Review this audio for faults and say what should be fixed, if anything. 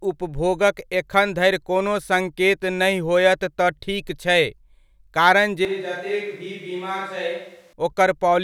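From 5.65 to 7.73 s there is a likely switch to a distant microphone: the close microphone's feed seems to have dropped out, leaving a pickup further from the speaker. The speech abruptly turns roomy and hollow, loses low-end body, and falls around 10 dB in level, with background noise rising to only about 30 dB below the speech. At 7.73 s the close, fuller sound returns just as suddenly. To prevent this, monitor the close microphone's connection and transmitter throughout the take.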